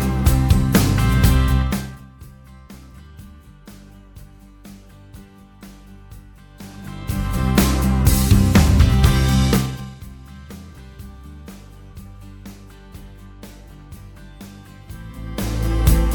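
From 1.58 to 2.09 s, a rapid ticking rides on the sound as it drops away, a fine zipping texture that lasts only as long as the level is moving. This is zipper noise. The fade of roughly 25 dB is applied in unsmoothed 2 dB jumps, at about twenty a second, rather than as a continuous ramp. Each abrupt jump puts a small discontinuity into the waveform, heard as a click.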